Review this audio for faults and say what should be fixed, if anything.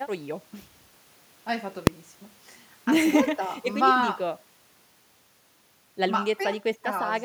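A single sharp bang at 1.87 s cuts through the speech. This is invalid numbers at full scale: a processing stage produced infinite or undefined values, and these were clamped to the maximum positive or negative level, so the output sat flat at one extreme value, far beyond the speech peaks, for one processing block. That block lasts about 1.33 ms, which fits a 64-sample block, far too short to hear as two pops with silence between, so it merges into one loud click. To prevent it, check each block's output for non-finite values and replace them with silence or the previous valid samples before they reach the output.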